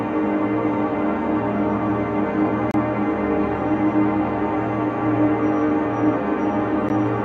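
Separately encoded pieces were joined without trimming encoder padding, leaving a gap at each join: a silence with smeared edges from 2.71 to 2.74 s, and a briefer 13 ms dropout at 6.89 s.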